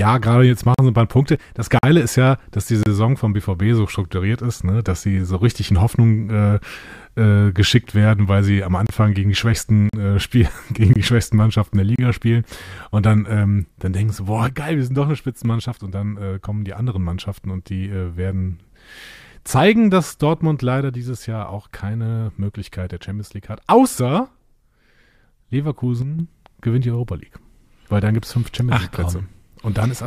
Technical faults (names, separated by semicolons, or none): gap between stream segments; one channel drops out